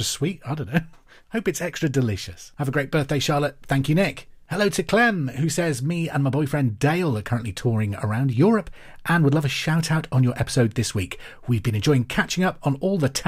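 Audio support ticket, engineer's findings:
No faults found in the speech recording. Nothing further to report.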